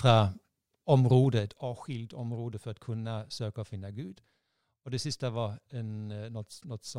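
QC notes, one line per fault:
1.21–1.65 s, zipper noise: the gain comes down in unsmoothed 2 dB steps, around fifteen a second, for a fall of roughly 10 dB. Each jump puts a small click into the speech, and together they ride on it as a fast ticking zip.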